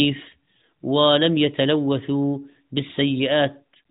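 No technical faults can be heard in this speech.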